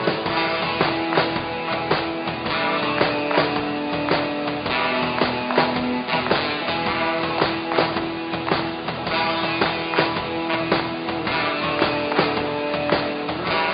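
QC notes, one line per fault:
No faults found. Nothing in the audio calls for a QC entry.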